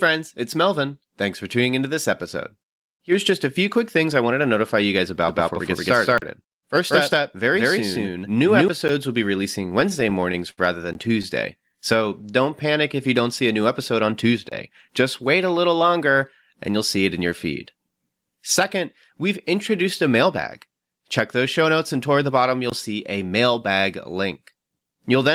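From 5.28 to 8.68 s a doubled audio track is heard: a second, full-band copy of the speech runs about a fifth of a second behind, at roughly the same level, with no reverberant tail. It starts and stops abruptly, likely from a second capture path or a misaligned edit.

Inside that span, from 6.18 to 6.22 s, a 40 ms block of digital silence cuts in. Zeros were played in place of the audio. Shorter blocks of the same fault follow: a 10 ms tick at 8.88 s, 20 ms from 10.93 to 10.95 s, 27 ms from 14.49 to 14.52 s, and 20 ms from 22.70 to 22.72 s.

Between 9.69 and 10.59 s the audio shows repeated stalls (stutter). Packets arrived late, so the jitter buffer ran dry eight times. The receiver stretched the last sound across 131 ms in total, with the longest wait 64 ms. Nothing is lost, but the speech drags and hiccups.

From 11.58 to 12.51 s a jitter buffer slow-down plays the speech at 89% speed without any pitch change. 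The receiver repeated pitch periods to add 107 ms of reserve, so sounds are audibly drawn out.

From 14.69 to 15.96 s a jitter buffer speed-up does the opposite. Short pitch-period segments were cut, about 100 ms in all, to shed excess delay. The speech runs at 106% speed at unchanged pitch and sounds slightly hurried.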